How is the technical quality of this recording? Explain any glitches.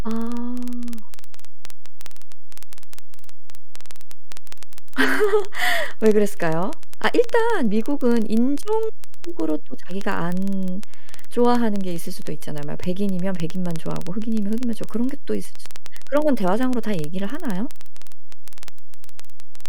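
The recording has two technical faults: constant clock ticking and a DC offset.

Word clock ticks run from 0.11 s to 19.66 s, roughly every 0.05 s, hundreds in all. The receiving device is not locked to the sender's clock. The clocks differ by a few hundred parts per million. Each slip drops or repeats one sample, causing a sharp tick.

A DC offset is present throughout the speech. The whole waveform sits shifted off zero by a constant amount. You cannot hear it directly. It wastes headroom and shows as steady energy at the very bottom of the spectrum.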